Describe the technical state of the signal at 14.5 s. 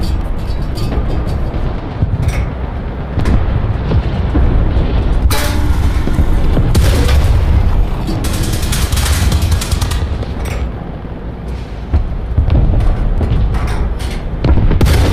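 At 14.5 s the signal is intact, with no audible technical fault at that moment.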